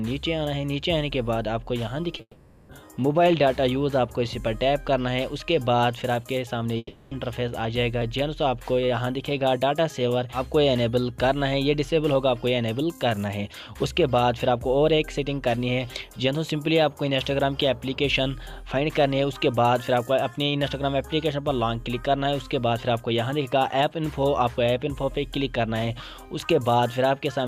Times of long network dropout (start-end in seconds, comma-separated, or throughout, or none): 2.21-2.71, 6.77-7.13